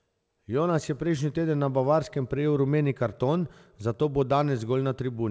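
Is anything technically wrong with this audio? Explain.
No, nothing is technically wrong: the speech has the bandwidth of a wideband call path, with no content above 8 kHz and the usual coding texture of a call codec, all of which is normal for audio carried over a call.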